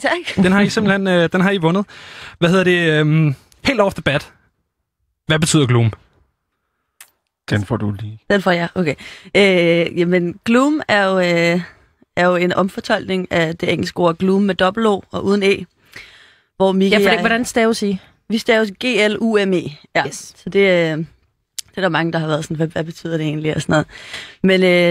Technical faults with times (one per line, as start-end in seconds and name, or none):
none